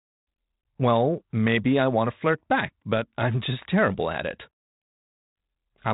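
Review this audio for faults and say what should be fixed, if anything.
Nothing here needs fixing: the speech comes through a G.726 ADPCM path at 32 kbit/s, the DECT cordless rate, which keeps the band below 4 kHz and leaves only light coding noise that tracks the speech level, as that path normally does.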